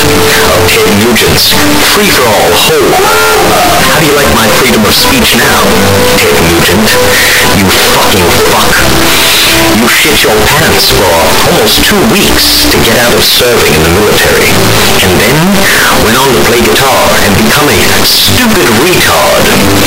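From start to finish the audio is nearly square at an almost constant high level, very loud and harsh, with background noise as loud as everything else. This is float read as integer, likely 32-bit float samples read as 32-bit integers, so sign and exponent bits set the level.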